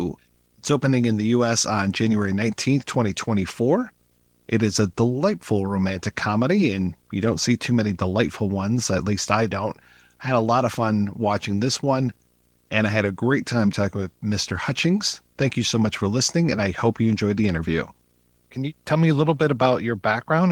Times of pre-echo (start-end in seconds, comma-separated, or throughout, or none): none